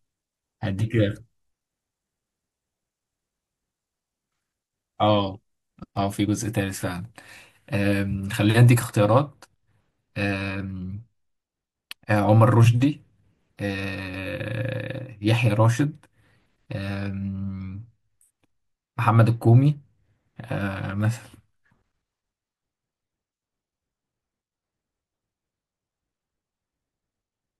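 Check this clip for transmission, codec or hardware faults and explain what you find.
One fault is present, confined to the opening section. From 0.0 to 8.84 s the speech has pre-emphasis left on: a treble boost matching the CD 50/15 µs curve was never undone by de-emphasis, leaving about 8 dB extra at 10 kHz relative to 1 kHz. The result sounds thin, bright and sibilant.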